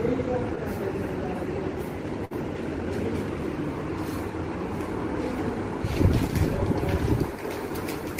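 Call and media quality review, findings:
Burst of packet loss, 2.25–2.33 s. Sound stalls about 55 ms, concealment extends and fades the last frame, then jumps ahead, about 60 ms missing. Jitter buffer/network. Spectrogram: smeared, decaying band, hard edge; waveform: tapering repeat, abrupt splice.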